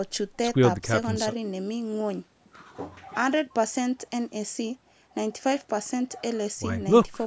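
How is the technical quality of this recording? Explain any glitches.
No glitches turn up anywhere in this speech recording; it has simply been through a call's microphone processing, so the lowest bass is trimmed away and nothing reaches above 8 kHz, which is just how that path normally sounds.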